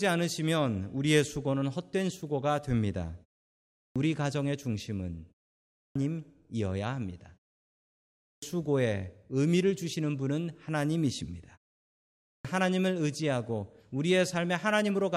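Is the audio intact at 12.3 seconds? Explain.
No. At 12.3 s there is a clipped start after a pause: after 0.65 s of silence the output device was asleep and still waking, so 12.14 to 12.45 s, about 306 ms, is lost. Speech bursts in abruptly without its onset, and the waveform and spectrogram show a hard vertical edge rather than a gradual attack.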